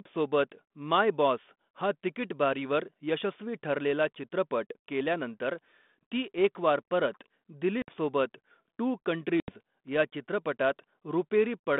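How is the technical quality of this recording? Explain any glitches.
The recording is narrowband telephone speech with two short dropouts. The band runs from about 200 Hz to 3.6 kHz, with the light grain that fits 32 kbit/s G.726 ADPCM.

Packet loss on the ADPCM call strikes at 7.82–7.93 s, right after "केल्यानंतर ती एकवार परत", and again at 9.4–9.5 s. About 60 ms and 80 ms of audio, a few packets each time, were replaced by silence. The receiving decoder's adaptive predictor and step size then no longer matched the sender's, so the speech comes back slightly distorted before it settles. On a waveform each gap is a flat, sharp-edged hole. On a spectrogram it is a blank vertical strip.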